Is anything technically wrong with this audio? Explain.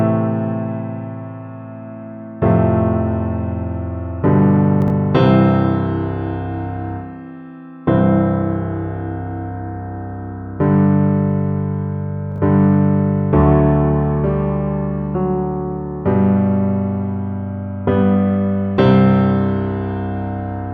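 Yes, there are chunks out of order twice, at 4.82 to 4.90 s and 12.32 to 12.38 s. A 20 ms chunk plays three, then two, slots late, so the sound briefly jumbles. The waveform shows three hard discontinuities per event, and the spectrogram shows thin vertical lines.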